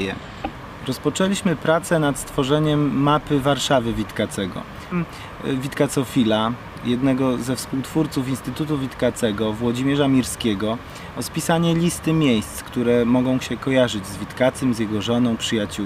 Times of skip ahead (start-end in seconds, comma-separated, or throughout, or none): 4.91-4.93